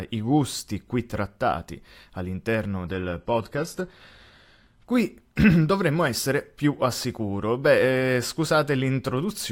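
Just after "gusti qui trattati all'interno", from 2.86 to 4.86 s, the adaptive stream drops to a lower bitrate. Treble abruptly thins, suggesting a low-rate HE-AAC version. A spectrogram shows a hard ceiling at 12.3 kHz; the waveform continues gaplessly.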